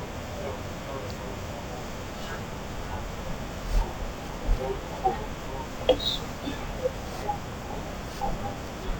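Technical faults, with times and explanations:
Throughout: stereo read as mono. The speech crawls along at half speed and sits a full octave low, because left and right samples were taken as one stream, so each original moment now spans twice as many samples played back at the normal rate.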